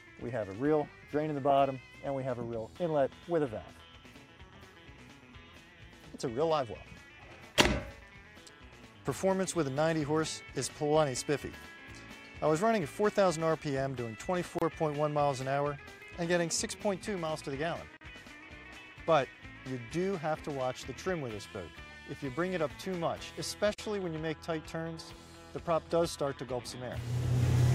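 Gaps at joins of encoded pieces open at 14.59 s (30 ms), 17.97 s (43 ms) and 23.74 s (48 ms): untrimmed encoder delay and padding leave brief silences with smeared edges before the sound resumes.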